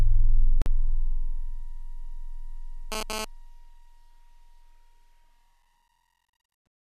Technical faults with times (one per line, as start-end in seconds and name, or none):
0.62-0.66 gap at a join of encoded pieces
2.92-3.25 GSM phone buzz